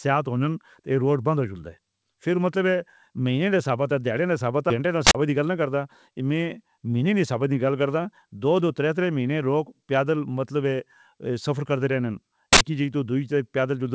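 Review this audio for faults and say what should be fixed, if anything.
At 4.70–4.72 s the speech has a skip ahead: about 0.7 s of audio is missing and the two sides are butted together with no gap and no fill. It is a clean jump forward, unlike a dropout, which leaves a silence or a smeared concealment. The receiver should discard stale packets gradually through time-stretching rather than dropping a whole block at once.

Two loud 80 ms bursts of harsh digital noise, at 5.07–5.15 s and 12.53–12.61 s, come from an uninitialised buffer, where leftover memory was played as samples. Each one fills a whole block. Output buffers should be zeroed or filled before they are handed to playback.

From 5.28 to 5.68 s a jitter buffer speed-up runs the speech at about 109% by trimming short pitch-period pieces, around 40 ms in total. The pitch stays the same, so this is time compression rather than a resampling error, which would raise the pitch as well. 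This is the buffer shedding excess delay, so smoothing the delay changes at the source would prevent the speed-up too.

The G.722 call path, with nothing above 8 kHz, accounts for the band limit and is not a fault.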